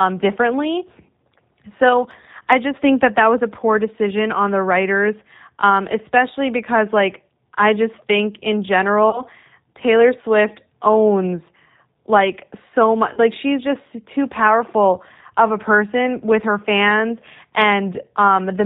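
Speech with a narrow, slightly rough and synthetic quality throughout, as if nothing above 4 kHz survives. This is G.729 codec damage, plainly audible and consistent with an 8 kbit/s G.729A coder rebuilding the voice from a vocal tract filter, pitch predictor and a few pulses per frame. At 9.10 to 9.23 s, just before "taylor swift owns like", and at 13.13 to 13.20 s, between "owns like so much" and "she's just too powerful", the voice smears into a brief buzzy tone or coloured noise that fades, and stays weakened for a moment afterward. This is VoIP packet loss concealed by the speech codec: about 30 ms of audio went missing each time, and the decoder stretched its last pitch and filter at falling gain, recovering only gradually.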